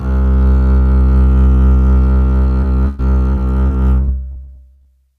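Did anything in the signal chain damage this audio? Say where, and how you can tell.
Yes. Repeated packet loss (robotic sound) hits the music from 2.61 to 4.87 s, a network fault: eleven short holes, the longest 100 ms, are each patched by stretching the preceding sound, so about a fifth of that stretch turns choppy.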